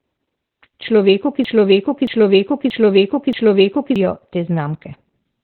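From the start, the speech carries heavy Opus voice compression: nothing reaches above 4.2 kHz, and the coarse SILK coding leaves it muffled, hoarse and faintly robotic, which fits a very low bitrate around 8 kbps. The band limit sets it apart from plain noise or distortion.

From 1.45 s to 3.96 s a broken-record loop takes over: one 0.63 s fragment plays four times back to back, identical each pass, likely because the stream stalled and kept resending its last buffer. Unlike a stutter or echo, each repeat is exact and the missing audio never returns.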